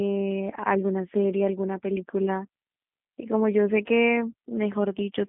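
From start to finish the speech carries G.729 codec damage: the 8 kbit/s vocal-tract-and-pulse rebuild sounds rough and synthetic, with nothing above 3.7 kHz surviving.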